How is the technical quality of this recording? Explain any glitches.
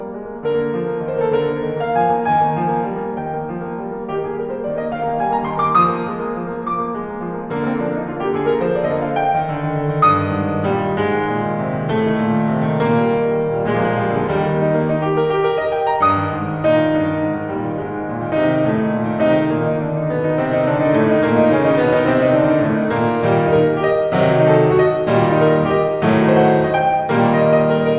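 The music comes across as a continuous, intact signal, with no technical faults to be heard anywhere in the recording.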